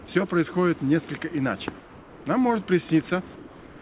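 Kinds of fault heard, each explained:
Comfort noise in place of the background: The call's sender likely stopped transmitting during quiet stretches, leaving the receiver to synthesise a stand-in noise. From 1.8 to 2.26 s, and again from 3.36 s to the end, the real background, sitting about 24 dB below the loudest passages, gives way to a smooth, detail-free hiss, about 3 dB quieter in the first gap and about 1 dB quieter in the second, all within the narrowband call's 4 kHz ceiling.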